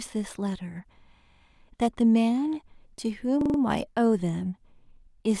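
Speech with two stutters from a repeated buffer, at 1.32 to 1.41 s and again at 3.41 to 3.58 s. When fresh audio arrived late, the playback device replayed its last 43 ms block, which fits a 1024-sample buffer, twice at the first spot and four times at the second. On a waveform the same short shape recurs back to back, and a spectrogram shows identical tiles separated by thin vertical lines at each hard join. Essentially no audio was lost.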